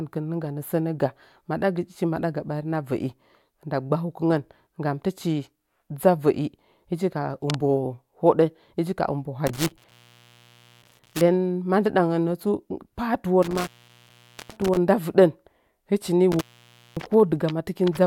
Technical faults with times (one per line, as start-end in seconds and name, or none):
9.47-11.21 intermittent contact
13.43-14.77 intermittent contact
16.32-17.06 intermittent contact